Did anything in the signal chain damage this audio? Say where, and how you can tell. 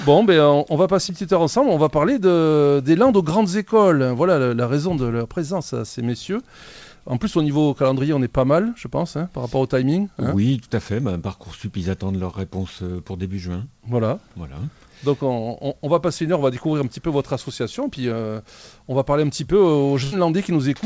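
Yes, at the network stage: a burst of packet loss from 20.04 to 20.14 s. About 80 ms never arrived; the receiver stretched and faded the last sound, then jumped ahead. A spectrogram shows frozen, dimming bands; the waveform shows a decaying repeated cycle.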